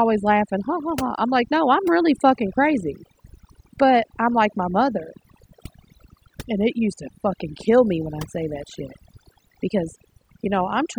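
Overdone noise removal runs through the whole speech clip. A noise reduction stage was pushed too hard. It shuts off frequency bands that sit near its noise estimate, taking quiet parts of the voice too. The background drops and breaks up into twinkling specks.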